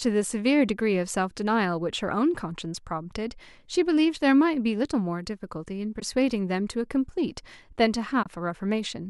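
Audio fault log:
6.00–6.02 s and 8.23–8.26 s, AAC frame loss with muting: two brief soft-edged dropouts in the speech, about 20 ms and 30 ms long. The gap lengths fit two and three lost 10 ms frames of a low-delay AAC stream, likely AAC-ELD, which carries only light coding grain. The decoder zeroed the missing spectrum, and the overlapping windows fade the sound out and back in.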